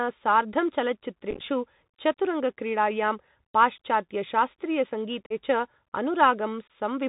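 From start to finish the speech runs through a Bluetooth CVSD headset codec, and the damage is plainly audible. It sounds like a 64 kbps CVSD link: one bit per sample just nudging the waveform up or down with an adapting step. Nothing gets through above 4 kHz, so the top end is gone, s sounds come out scratchy, louder bright bits distort where the step can't keep up, and there's a grainy hiss sitting under everything.

Then there's unconcealed Bluetooth headset packet loss in three places. From about 1.31 to 1.42 s it's scattered: roughly 60 ms of audio missing across 105 ms, with the longest single gap about 11 ms. That's a good dozen-plus small packets dropping, which comes across as a brief crackly, chopped patch. At 5.26 to 5.33 s about 41 ms goes missing, and at 6.68 to 6.70 s another 22 ms or so. Each time the dropped packets get replaced by silence or idle fill instead of being patched over, so you hear hard-edged little holes that can click, and the sound comes back quieter for a moment as the CVSD step size recovers.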